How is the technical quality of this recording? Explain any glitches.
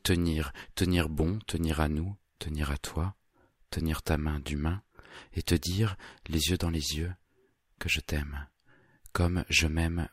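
Nothing here trips me up: I can't pick out a single glitch or technical fault anywhere in the recording.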